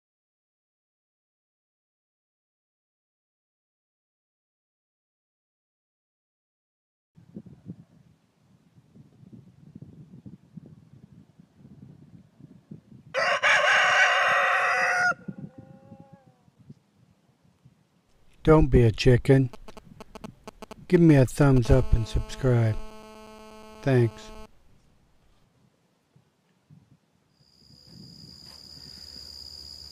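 The audio carries radio-frequency interference from a nearby 2G handset in two stages. From 19.53 to 21.67 s, GSM signalling bursts appear as a galloping dit-dit-dit of brief 217 Hz buzzes, roughly 15 dB below the programme. The phone is exchanging short control transmissions, and the audio circuitry rectifies each radio pulse group into sound. Straight after, from 21.69 to 24.46 s, it becomes a steady GSM phone buzz: a hard, raspy 217 Hz tone rich in harmonics, about 24 dB below the signal and unrelated to it. This is the continuous burst pattern of an active call, rectified the same way.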